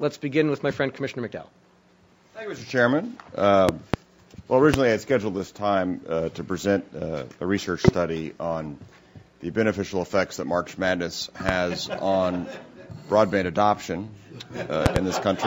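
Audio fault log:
3.69–3.96 s, 4.74–4.76 s, 7.88–7.91 s, 11.49–11.52 s, 14.86–14.99 s: loud pop. Sharp pops rise about 20 dB above the sound, doubled in the first and last. A sudden voltage pulse, likely from a plug, switch or static, adds to the signal, which continues underneath.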